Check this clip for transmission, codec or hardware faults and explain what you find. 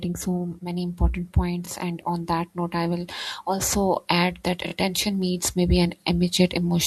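One fault is present: repeated frames, at 4.67 to 4.72 s. A 24 ms slice of the speech plays twice more in a row, as if one compressed frame was sent again. The decoder replays it, giving a short stutter and adding 48 ms.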